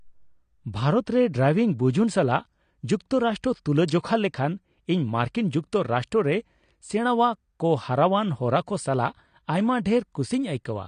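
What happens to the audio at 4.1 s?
At 4.1 s the speech is still carrying the AAC compression damage that runs through the whole clip, likely from an AAC-LC encoder starved of bits, which fits a rate around 32 kbps. To fit that budget the encoder has discarded everything above 9.7 kHz and coarsely quantised the remaining spectrum, leaving gaps between bands. The speech sounds dull and smeared, with a fizzy, warbling edge on sibilants and held sounds.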